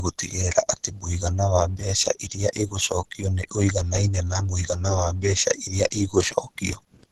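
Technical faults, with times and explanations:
Throughout, low-bitrate audio saved at a high bitrate: the speech stops dead at 12.4 kHz with coarse artefacts, likely a heavily compressed source re-saved as a high-bitrate MP3.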